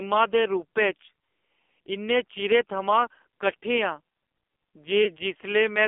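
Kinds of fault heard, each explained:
AMR narrowband mobile codec: The mobile speech codec limits the sound to about 250 Hz to 3.5 kHz. Its heavy buzzy, synthetic character points to a very low bitrate, near 5.9 kbps.
Lost AMR speech frames: At 5.04 s the decoder briefly patches over missing data with falling gain. The result is a short dip or warble, about 0.11 s long, consistent with one 20 ms frame lost.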